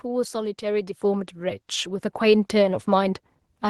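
At 1.02 s the speech and the background behind it jump up together by about 5 dB in a single step, and the level then stays there. This is a microphone volume stepped up: the calling software judged the input too quiet and raised the device's gain.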